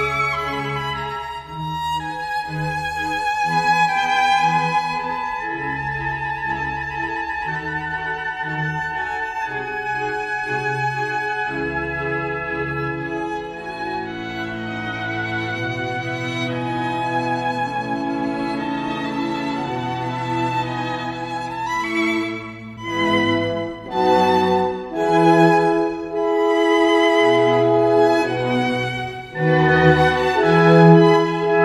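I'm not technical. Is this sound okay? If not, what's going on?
Yes, the sound is okay. Nothing goes wrong at any point, so there is nothing here that needs fixing.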